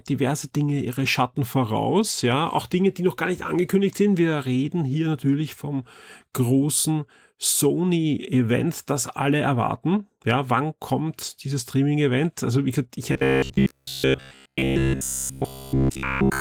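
Right after "wie gesagt ich", at about 13.12 s, the speech collapses into a stiff metallic buzz that lasts until 16.40 s. This is robotic sound from repeated short buffers. New audio likely stopped arriving in time, so the playback kept looping its last short chunk, and essentially the whole stretch is repeats. The buzz sits at 66.8 Hz, which fits a loop of roughly 15 ms. The speech is also Opus-coded, with only light coding damage.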